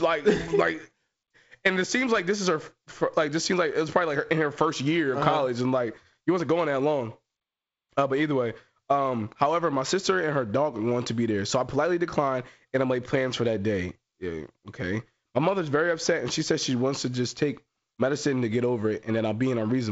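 No technical faults can be heard in this speech recording.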